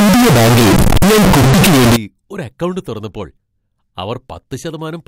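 Speech, with a float-read-as-integer fault from 0.0 to 1.96 s: the sound is harsh, near-square and pinned at an almost fixed, high level, with background noise as loud as the voice, likely 32-bit float samples decoded as 32-bit integers. Unlike ordinary clipping, the level ignores the original loudness, yet pitch stays followable.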